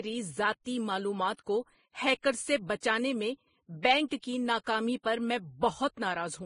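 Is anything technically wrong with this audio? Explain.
Yes. Throughout the speech the grain, swirl and smearing of two codecs are heard together, which points to transcoding between lossy codecs: likely an MP3 stage near 41 kbit/s re-encoded as Vorbis near 26 kbit/s. The second encoder wastes bits re-coding the first one's artefacts and adds its own. A spectrogram shows a hard ceiling with nothing above 10.5 kHz and patchy, blotchy texture below it.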